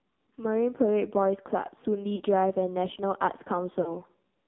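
Throughout, the AMR narrowband mobile codec confines the audio to roughly 200 Hz to 3.7 kHz and adds heavy buzzy, synthetic coloring, which suggests a low rate near 6 kbps. A simple band-limited line would sound dull but clean, without this rasp.

At 2.16 to 2.23 s and again at 3.82 to 3.96 s, lost AMR speech frames make the decoder repeat stale pitch and vocal tract settings at falling gain. Each loss fits about two missing 20 ms frames. The result is a smeared warble that sinks and then recovers roughly, rather than a clean silent gap or a click.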